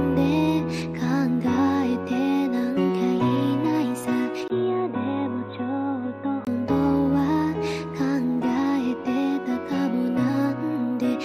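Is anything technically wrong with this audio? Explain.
Yes. From 4.48 s to 6.47 s the sound becomes dull and boxy, with nothing above 3.9 kHz, a level drop of roughly 5 dB, and a different background hiss sitting around 40 dB below the signal. A gap of about 20 ms marks the change. This is likely an input switched to a poorer device partway through recording: a narrower-band microphone or headset path took over briefly, bringing its own tone, gain and noise floor.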